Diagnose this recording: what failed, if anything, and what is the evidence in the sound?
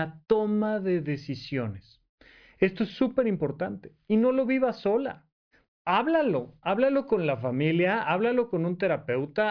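Nothing failed in this recording, and the sound shows no evidence of any fault.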